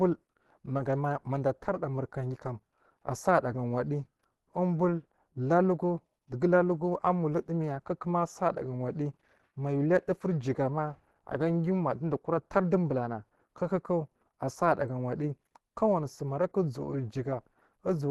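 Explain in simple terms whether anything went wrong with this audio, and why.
Something did go wrong: the speech sounds compressed from start to finish, with a muffled, hoarse and grainy quality, and nothing above about 12 kHz. The likely cause is Opus compression at a low setting, where the encoder switches to a speech-oriented mode that rebuilds the sound roughly to save data. Unlike MP3 damage, the sound swirls less; it stays steady but turns rough and fuzzy.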